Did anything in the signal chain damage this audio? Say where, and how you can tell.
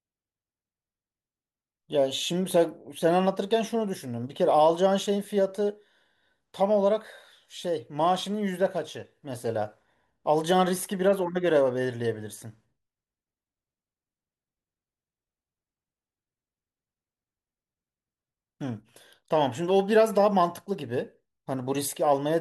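No, nothing in the signal chain has left audible damage on this speech recording. No stage, from capture through to playback, shows a mark that can be heard in the sound.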